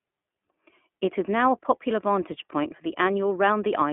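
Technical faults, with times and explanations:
throughout: iLBC codec. The speech is confined to a telephone band of 200 Hz to 3.4 kHz, and plainly audible coding damage adds a rough, synthetic edge, since each 20 ms frame's excitation is coded on its own; the texture fits iLBC's 15.2 kbps mode.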